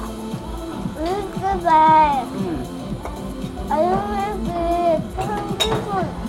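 No technical faults are audible anywhere in the recording.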